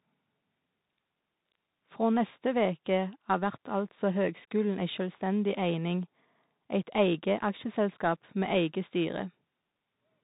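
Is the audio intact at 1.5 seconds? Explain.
No, not at 1.5 seconds, and not anywhere else in this speech either, since the Bluetooth CVSD headset codec runs through the whole clip. It sends one bit per sample saying only up or down, with an adapting step, and the sound points to the standard 64 kbps rate. Nothing above 4 kHz survives, so it's plainly narrowband. Loud high content outruns the step and distorts, s sounds go scratchy, and a grainy hiss sits underneath.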